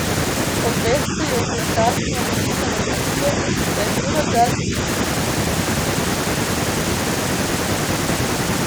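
The speech dips three times: 0.9 to 1.25 s, 2.0 to 2.14 s, and 4.01 to 4.75 s. The first two drops are slight. The third is deeper, roughly 10 dB. This is likely speech suppressed in double talk, where an echo canceller mistook overlapping talk for echo.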